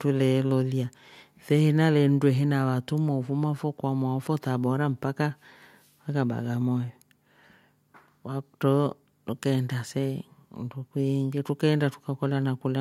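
Nothing stood out as a technical fault on listening to this recording of speech.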